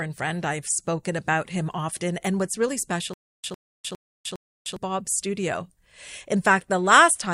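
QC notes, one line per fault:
3.14–4.76 s, stutter with silent gaps: right after "what's really", a short burst of about 104 ms repeats four times at a steady pace of one every 407 ms, each followed by about 303 ms of dead digital silence, so the speech jerks and drops out instead of continuing. The likely cause is a stalled player or stream that replayed its last buffered fragment at each retry and then ran empty, losing the audio that belonged in that stretch.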